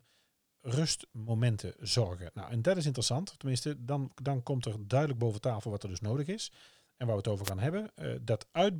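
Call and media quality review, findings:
Wireless microphone noise hit, 7.43–7.51 s. Analogue FM radio link fading as reflected paths cancel at the receiver; receiver noise surges over the signal. Heard as a brief swish of static, roughly 70 ms.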